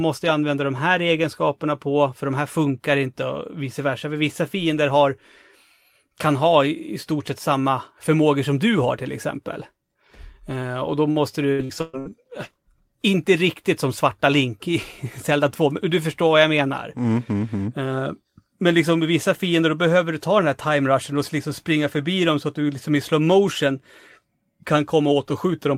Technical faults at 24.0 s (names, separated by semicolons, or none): none